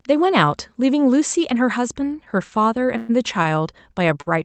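At 2.97 s the speech stops moving forward for about 0.11 s, a call audio freeze. The last sound hangs on as a fading buzz, likely because packets stalled and the jitter buffer ran dry. On a spectrogram it shows as a smeared horizontal band. The speech then picks up exactly where it left off.

Short stalls from late packets follow at 3.43 s and 4.21 s, stretching a sound by 18 ms and 49 ms. Each is heard as a sound held too long, with a slight buzz or dip, and appears on the waveform as a briefly repeated, flattened stretch.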